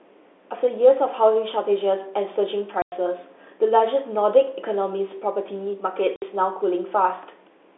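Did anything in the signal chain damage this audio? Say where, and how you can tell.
Yes, at the network stage: packet loss filled with silence. The speech drops out dead from 2.82 to 2.92 s (100 ms) and from 6.16 to 6.22 s (60 ms), with hard edges. Both holes fit lost 20 ms packets the receiver replaced with silence.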